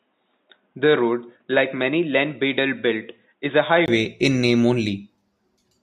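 A speech clip that opens dull and band-limited: from the start to 3.88 s nothing reaches above 3.8 kHz, the level sits roughly 5 dB lower, and a faint new background noise lies far below the speech. Then a brief gap of about 20 ms leads into fuller, clearer sound. This points to an input switched to a poorer device, likely a headset call profile, because bandwidth, level, tone and noise floor all change together at one instant with a silence. That combination separates it from a simple low-pass filter or codec bandwidth drop.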